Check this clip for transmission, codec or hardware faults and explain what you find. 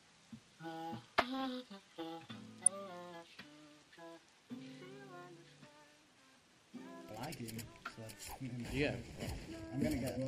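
One transmission fault shows up, a short burst of DAB burbling from 2.60 to 2.67 s. Weak reception left a small residual bit error rate, on the order of a tenth of a percent, and some errors slipped past error correction into the MP2 audio data. Corrupted samples put short blips of noise into single sub-bands. The burst lasts about 72 ms, which fits roughly three damaged audio frames. It sounds like a brief burble of noise blips laid over the programme.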